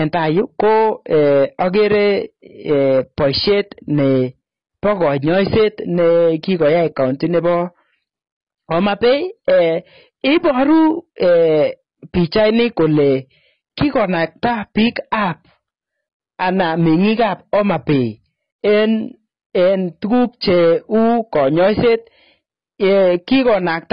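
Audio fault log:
throughout, hard clipping: The speech is pushed about 7 dB past what the signal path can carry, so the peaks get sliced flat. Roughly 7 percent of the samples end up sitting on that ceiling, which is a lot. Those squared-off tops throw new harmonics high up the spectrum, so every louder syllable comes with a gritty, harsh fuzz rather than a clean edge. It's a constant rasp on anything loud.
throughout, AAC compression: Nothing survives above about 5.1 kHz, so the speech sounds dull and boxed-in, with the sibilants dulled and smeared instead of crisp. Sustained sounds have a watery, warbling texture, and some of the remaining detail comes across as fizz rather than real content. That combination of a low cut-off and a smeary, swirly surface is likely heavy AAC-LC coding at a starved bitrate, which fits something around 16 kbps.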